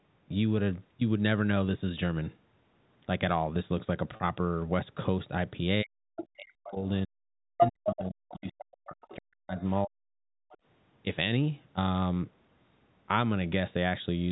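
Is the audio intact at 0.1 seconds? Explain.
Yes, at 0.1 seconds the audio is intact, with no fault present at that moment.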